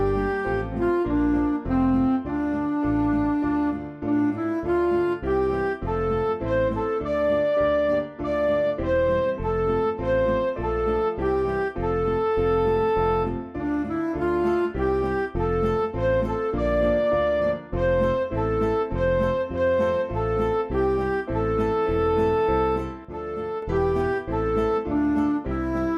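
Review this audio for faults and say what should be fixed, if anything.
From 23.05 to 23.62 s one channel drops out: after the mono fold-down the sound falls abruptly by about 6 dB, likely because one side of the stereo feed was lost, shown as a sudden step down in waveform height. Secure and monitor both channel paths.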